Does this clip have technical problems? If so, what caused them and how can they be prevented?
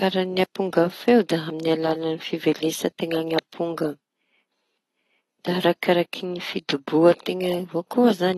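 Yes. AAC compression damage is plainly audible throughout the speech. Nothing sounds above 12.1 kHz, so sibilants are dull and fizzy. The smeared, patchy spectrum fits a bitrate near 32 kbps, likely from AAC-LC encoding. Encoding at a higher bitrate prevents it.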